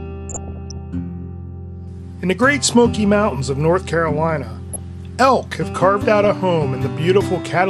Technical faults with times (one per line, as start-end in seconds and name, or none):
0.00-7.70 MP2 compression
0.29-0.78 DAB burbling
4.49-4.79 DAB burbling
6.24-6.41 DAB burbling